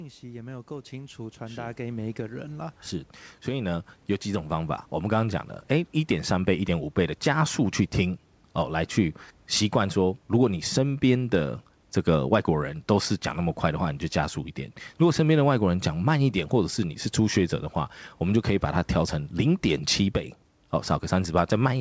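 A speech recording with automatic gain rising twice near the start. From 0.2 to 2.87 s the level climbs by about 12 dB, then from 3.45 to 5.54 s it creeps up again by about 6 dB. The gain control heard the input as too quiet and kept pushing its gain up, so the voice and the faint room noise (about 39 dB under the speech) swell together. Nothing is audible above 8 kHz, which fits a wideband call codec like G.722.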